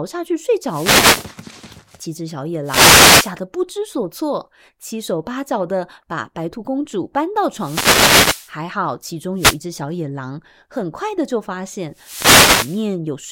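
Five wireless microphone noise hits break into the speech, at 0.65–1.33 s, 2.63–3.34 s, 7.50–8.56 s, 9.35–9.59 s and 11.92–12.90 s. Each is a swish of static as the FM radio link fades and receiver noise swells over the voice. On a spectrogram, broadband hiss fills the gaps between harmonics; the waveform gains a fuzzy noise floor.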